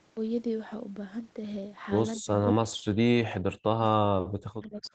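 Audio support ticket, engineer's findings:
Speech suppressed in double talk, 2.21–3.6 s, 4.0–4.21 s and 4.45–4.94 s (to end). Speech drops out in pieces, about 40 dB at deepest, roughly 1 s, 0.2 s and half a second affected. Likely cause is the echo canceller, which can't tell near-end talk from far-end echo while both are active, so its suppressor turns down both. The 8 kHz top end throughout fits normal wideband call processing.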